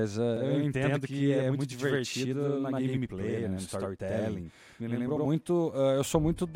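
Channel delay (doubling) runs from 0.37 s to 5.25 s. One channel arrives about 85 ms late, which fits a 4096-sample buffer, and when both are summed to mono the late copy sits at equal level, heard as a distinct slap echo trailing every syllable of the speech.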